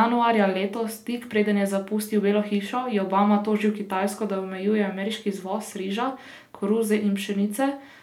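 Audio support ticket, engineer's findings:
No technical faults found in the speech clip. Nothing to escalate; ticket can be closed.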